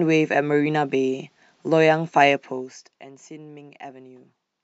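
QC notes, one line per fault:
2.29–3.08 s, zipper noise: the speech level falls by roughly 15 dB across this stretch, but not smoothly. The gain moves in small discrete steps, about 100 per second, with no ramp between them. Each jump leaves a tiny break in the waveform, heard as a faint click. Packed this closely, the clicks merge into a fine ticking or zipping texture that rides on the speech while the level drops.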